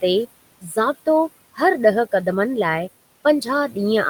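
Noise suppressor artifacts run through the whole speech clip. The suppressor pulls the steady room noise, which sits about 19 dB below the speech, down by about 20 dB in each frame, so the residue pumps between phrases.

From 0.61 to 0.77 s, speech is cut by the noise suppressor. It misreads part of the speech as noise and attenuates it by up to about 16 dB for roughly 150 ms, so that passage sounds swallowed and faint.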